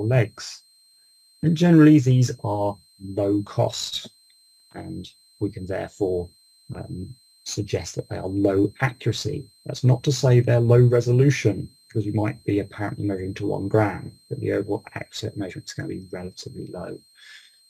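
A switching power supply is running in an audible burst mode or beating with another one, producing a switching supply whistle throughout the clip: a thin high tone wandering between 4.1 and 4.23 kHz, about 35 dB below the sound.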